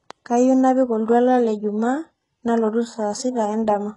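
From start to finish the speech carries the signature of heavy HE-AAC compression, most likely a very low-bitrate encode in the region of 12 kbps. The lower spectrum is coded directly, while the treble is rebuilt by copying lower bands upward and shaping them with a rough envelope, so sibilants come out gritty and metallic, and nothing survives above 11.1 kHz. Unlike plain low-pass filtering, the top end stays bright but sounds synthetic, its harmonics not lining up with those below.

From 1.06 to 1.08 s there is pre-echo, a short hiss spread over roughly 23 ms ahead of a sharp onset. The coder spread quantisation noise across its whole transform block, so noise meant to be masked by the loud attack leaks into the quiet moment just before it, and the attack itself sounds blunted. What separates it from a click or dropout is that the disturbance comes before the transient rather than at it, and is diffuse noise, not a discrete pop.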